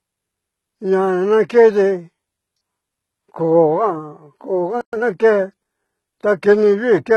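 Throughout the speech, the treble is rebuilt rather than captured. Content stops at about 11.8 kHz, and the upper band sounds gritty and metallic, with sibilants turning lispy. This heavy damage is likely from HE-AAC compression, consistent with a bitrate near 16 kbps, where spectral band replication copies lower bands upward.

At 4.81 s the audio cuts to silence for 120 ms and resumes at 4.93 s. That gap mid-flow is likely a playback stall: the player ran short of data or its thread was blocked, so output stopped until it recovered.

From 4.93 to 5.05 s the speech runs hurried at 2.0 times normal speed while keeping its pitch. This is time-compressed catch-up: small pieces are dropped and cross-faded to clear the backlog built up during the stall.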